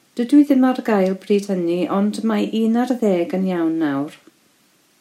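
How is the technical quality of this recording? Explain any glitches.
The recording has no technical glitches to explain. Nothing in the speech is interrupted or disturbed at any point.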